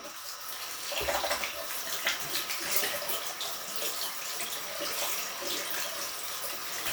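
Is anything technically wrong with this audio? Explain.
Yes, the audio plays back too fast and too high for its entire length.

Wrong sample rate, throughout: everything runs about 1.38 times faster than it should, with pitch raised by about 5.5 semitones, so the sound is hurried and shrill. The samples are being clocked out faster than they were captured, with no resampling, which stretches speed and pitch by the same ratio. That ratio fits audio recorded at 32 kHz being played at 44.1 kHz.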